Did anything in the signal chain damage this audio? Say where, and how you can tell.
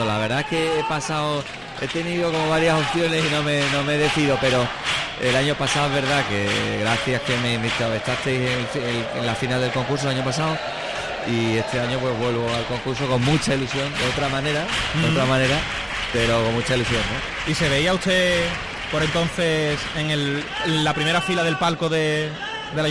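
No, no signal-chain damage heard.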